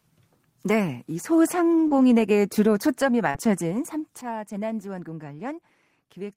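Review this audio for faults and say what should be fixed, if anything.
Short concealed packet loss shows up twice, at 1.87–1.94 s and 3.31–3.48 s. Each time about 40 ms of speech never arrived in time. The receiver papered over it by extending the preceding sound for roughly 33 and 36 ms, then blended back, leaving a brief smear. A somewhat larger jitter buffer or forward error correction on the link would keep those gaps from needing concealment.

There's a sudden gain jump at 4.21 s. The level drops by about 10 dB in one step and stays down to the end, with the speech and background noise falling together. The likely cause is a gain setting applied instantly instead of ramped in. Smoothing any gain change over a few milliseconds would prevent that step.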